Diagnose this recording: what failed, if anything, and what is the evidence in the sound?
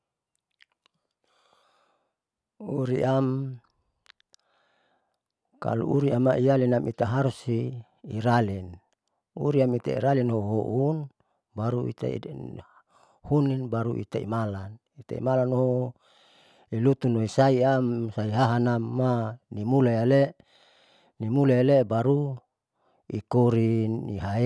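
The opening 1.63 seconds suffer a wrong sample rate fault at the playback or clocking stage. From 0 to 1.63 s the speech runs slow, at about 0.92 of normal speed, and sits about 1.5 semitones low, which fits 24 kHz material clocked out at 22 kHz with no resampling. Speed and pitch drop together by the same ratio, which rules out a time-stretch or pitch-shift fault, since those alter one without the other.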